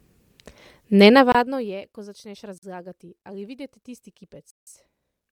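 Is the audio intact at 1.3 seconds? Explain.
No. From 1.32 to 1.35 s the signal drops out in a block of digital silence lasting about 26 ms. The stretch is silent, the typical result of the output buffer not being filled in time. The sound switches to silence and back with no fade, and the gap itself is heard as a short hole.

Around that moment, and throughout the clip, the speech carries plainly audible codec damage, likely from Bluetooth LC3 compression. The transform codec discards much of the upper spectrum and replaces it with synthetic noise, giving the voice a breathy, grainy edge. The artefact texture fits 10 ms frames at a rate around 48 kbps. This degradation is continuous rather than tied to 1.3 s, but it is present at that point.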